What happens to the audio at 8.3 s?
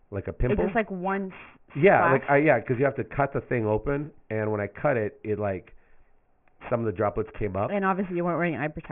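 Aliasing is present at 8.3 s, as it is throughout the clip. The speech sounds as if it was cut down to a 6 kHz rate without filtering, so content above 3 kHz folds back below it, leaving sibilants gritty and metallic, roughly 20 dB under the speech.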